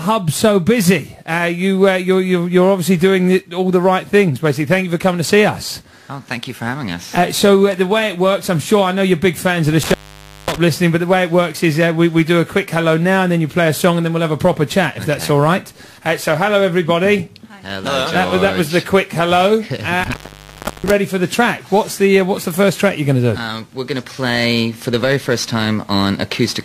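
At 9.83–10.58 s and 20.04–20.92 s, intermittent contact: a loose connection opens for 0.54 s and 0.70 s, with crackle at each edge and faint hiss, unlike a clean digital dropout.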